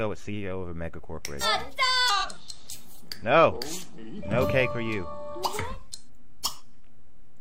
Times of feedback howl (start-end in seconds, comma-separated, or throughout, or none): none